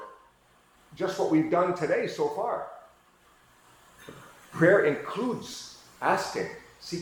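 Lost LE Audio frames occur at 5.52 to 5.54 s, where about 15 ms of the stream went missing, which fits a couple of dropped Bluetooth LE Audio frames. The LC3 decoder filled the gap by repeating the last good spectrum with randomised signs, and the loss was too short for that repeat to fade toward silence. The result is a brief noisy smear in place of the sound's tonal detail, alongside the light damage of the lossy compression.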